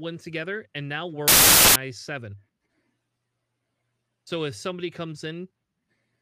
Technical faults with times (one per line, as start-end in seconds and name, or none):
1.28-1.76 samples built from the wrong bytes